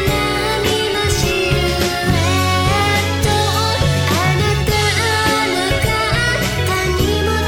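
At 5.75 to 5.77 s a single loud pop sits on top of the sound, which carries on underneath. A sudden voltage step, likely from a plug, switch or static discharge, peaks a few dB above the audio, showing as a sharp waveform spike and a thin broadband vertical stripe on a spectrogram.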